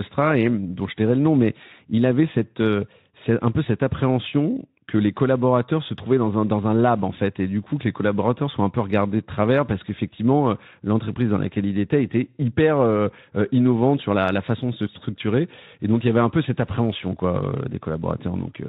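No technical faults can be heard in this speech recording.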